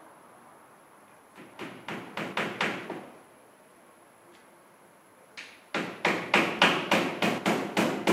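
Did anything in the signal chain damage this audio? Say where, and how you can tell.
Yes. The damage comes from the driver and buffer stage. There are six skips, at 1.54, 2.33, 3.76, 5.38, 6.59 and 7.38 s. There is no gap at any of them. Instead, the sound jumps forward. About 20 ms goes missing at 1.54, 5.38 and 6.59 s, and about 70 ms at the other three. This is likely a dropped buffer (overrun). The software read its input too late, new samples overwrote the old ones, and the two surviving edges were joined.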